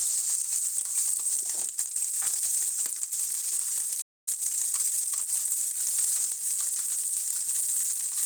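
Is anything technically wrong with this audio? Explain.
Yes. The audio carries three technical faults.

Opus compression, present throughout: the sound is grainy, rough and somewhat hoarse, with noisy texture where clean tones should be. This is likely a low-rate Opus encode, around 16 kbps, in its hybrid speech-oriented mode, filling starved bands with noise or folded energy.

A playback stall runs from 4.01 s to 4.28 s: the sound cuts out mid-flow into silence for about a quarter of a second. The player likely ran dry of buffered data or had its output thread blocked, then resumed once it recovered.

Time-compressed catch-up follows from 4.28 s to 5.28 s: for one second the sound runs hurried, at 1.25 times normal speed but unchanged pitch. The player trims small segments and cross-fades them to work off the backlog left by the stall.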